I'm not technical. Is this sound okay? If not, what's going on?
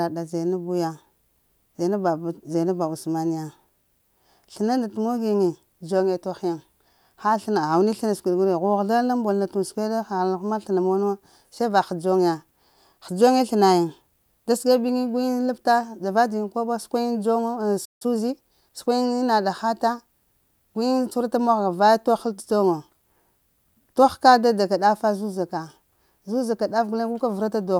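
No. A playback stall at 17.85 s cuts the speech to silence for about 0.16 s, likely because the player briefly ran out of audio data. Time-compressed catch-up follows from 18.02 to 19.06 s: the player trims tiny slices to regain lost time, so speech runs about 1.15 times faster, same pitch.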